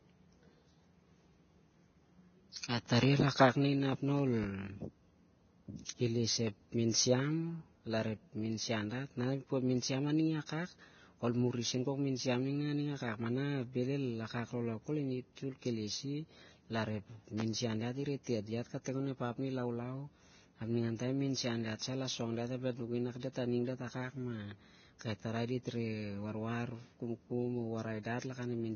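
Throughout the speech there is heavy damage that is likely from Vorbis compression at a very low bitrate, with the sound pointing to roughly 18 kbps. Nothing survives above 6.6 kHz, and the treble below that cut-off is coarsely quantised, so sibilants and breath turn into a grainy hiss and voiced tones sound roughened. On a spectrogram, the energy stops flat at 6.6 kHz, with blotchy, smeared texture in the upper band.

From 4.19 to 4.46 s a loud pop occurs twice, with a peak about 10 dB above the speech. The likely cause is a sudden voltage step or pulse added to the signal. The speech continues underneath. At 17.40 to 17.43 s a single pop stands about 15 dB above the speech. On the waveform each pop is a narrow spike above the speech envelope. On a spectrogram each is a thin vertical line across a wide range of frequencies.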